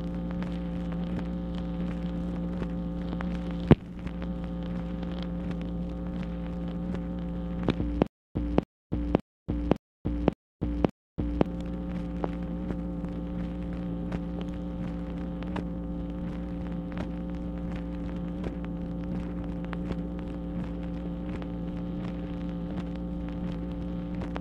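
Playback likely stalled from 8.07 to 11.46 s, replaying the last fragment per retry, then running dry. This gives a stutter with silent gaps: the same 279 ms burst repeats six times, each followed by 287 ms of silence, and the intervening audio is lost.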